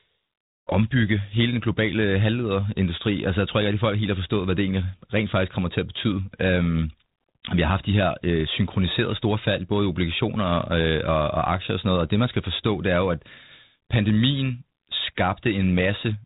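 Nothing stood out on listening to this speech.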